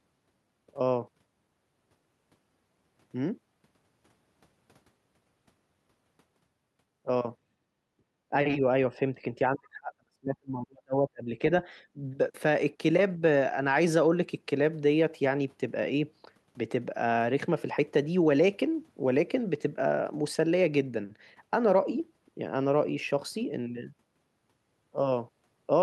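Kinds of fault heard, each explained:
Speech suppressed in double talk: with both sides talking at once, the echo canceller likely mistook the talker for loudspeaker echo and turned the talker down along with it. From 8.3 to 8.63 s the speech dips only slightly, a few decibels over a very brief stretch. From 8.9 to 11.65 s the suppression goes much deeper, as much as about 40 dB, leaving the speech broken into pieces for around two seconds in total.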